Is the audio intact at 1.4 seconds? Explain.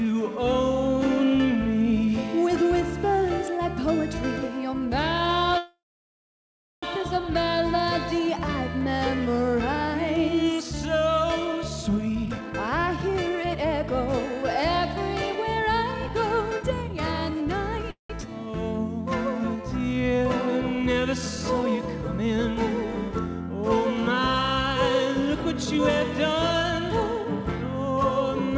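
Yes, the audio is intact at 1.4 seconds: it plays cleanly through the WebRTC call path, whose G.722 coding leaves nothing above 8 kHz, with no dropout, glitch or distortion at that moment.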